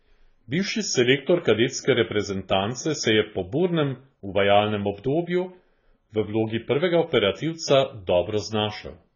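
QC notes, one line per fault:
Throughout: heavy AAC compression, likely from a very low bitrate near 16 kbps; spectrogram cut flat at 7 kHz with gappy bands, speech dull and warbling.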